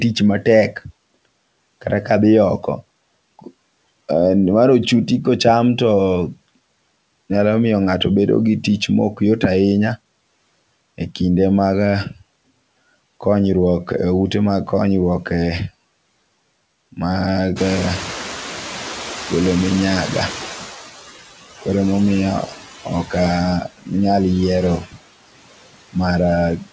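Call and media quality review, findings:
Noise suppressor artifacts, whole clip. Background pulled down about 19 dB between phrases, returning under speech. Component: noise suppressor, per-frame band gains. Spectrogram: speckled, blotchy noise floor that flickers frame to frame, with gaps between phrases and smeared noise under voiced segments. Waveform: floor collapses in pauses, swells with speech. Content tops out at 8 kHz, consistent with a wideband call codec such as G.722.

Noise suppressor catching up, 17.56 to 20.85 s. Room noise jumps about 17 dB near 17.5 s, settling about 13 dB below speech. Suppression starts weak, then deepens by about 10 dB over 3.29 s as the noise estimate adapts. Component: noise suppressor, slow noise tracking. Spectrogram: bright broadband band at onset fading gradually toward 20.85 s. Waveform: raised floor tapering down across that window.

Speech cut by the noise suppressor at 23.64 to 23.91 s (about 18 dB, roughly 150 ms), 24.81 to 24.97 s (about 19 dB, roughly 100 ms), and 26.58 to 26.68 s (about 14 dB, roughly 100 ms). 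Parts of speech swallowed or faint. Component: noise suppressor classifying low-level speech as noise. Spectrogram: speech energy notched out along with background. Waveform: sudden dips in envelope.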